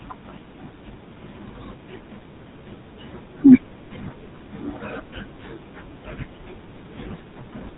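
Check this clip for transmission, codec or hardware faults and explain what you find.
The speech carries GSM full-rate codec damage from start to finish. The codec models the vocal tract and drives it with regularly spaced pulses, keeping a decimated excitation, and cuts everything above 4 kHz. The result is a dull, plainly buzzy, gravelly roughness consistent with 13 kbps full rate.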